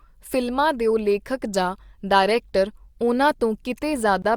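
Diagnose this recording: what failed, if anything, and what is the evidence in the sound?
The failure sits at the codec stage: a gap at a join of encoded pieces. At 4.22 to 4.24 s the speech drops out for about 22 ms and then resumes exactly where it left off. Two separately encoded segments were spliced without trimming, so the first piece's padded final frame and the second's start-up delay both remain as silence. On a waveform this shows as a flat gap with smeared edges; a spectrogram shows a thin vertical blank band, slightly smeared at its borders.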